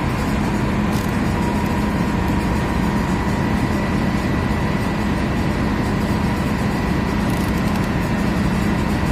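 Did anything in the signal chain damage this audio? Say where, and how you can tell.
Yes. A USB whine enters at the analogue stage, through the power or ground wiring, from 2.45 s to the end. A steady fixed-pitch tone sits at 1 kHz, roughly 30 dB below the signal. On a spectrogram it is a thin, unbroken horizontal line at 1 kHz starting at 2.45 s. The mechanism is the bus drawing current in 1 ms frames. That periodic load leaks into the audio path as a 1 kHz tone.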